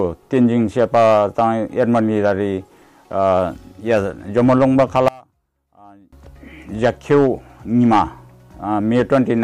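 Between 5.08 and 6.13 s the audio collapses by about 28 dB into a faint residue, likely one channel inverted, so the shared content cancels when summed to mono. The waveform shows a sudden narrow trough, and the spectrogram a dim band.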